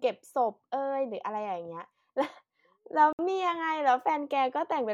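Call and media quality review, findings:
Brief hard cut to silence in the speech at 3.13–3.19 s, 62 ms, then audio resumes. Likely a Bluetooth stall: radio interference delayed packets, the headphone buffer ran dry, and playback paused until retransmitted packets arrived.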